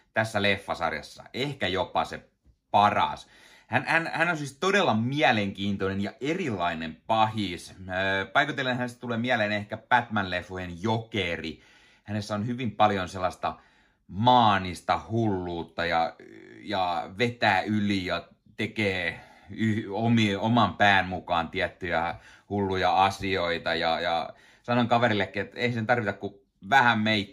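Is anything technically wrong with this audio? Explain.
No, nothing technically wrong turns up anywhere in this recording, so there's nothing here to flag.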